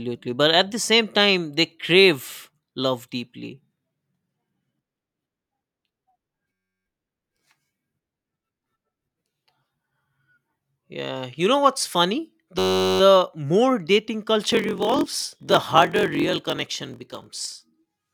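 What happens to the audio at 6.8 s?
A system hang loop runs from 6.53 to 6.86 s: a frozen driver replays one 10.67 ms slice, consistent with a 512-sample buffer, producing a steady 93.8 Hz buzz.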